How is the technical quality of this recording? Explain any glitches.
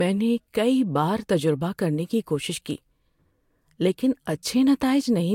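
The speech is limited by one fault that runs through the whole recording. It has nothing above 16.6 kHz and the artefacts of an earlier encoding from start to finish. The likely cause is low-bitrate audio saved at a high bitrate. An earlier lossy encode, which sounds like one of roughly 60 kbit/s, already stripped the top band and detail. Re-saving it as a larger MP3 could not bring any of that back.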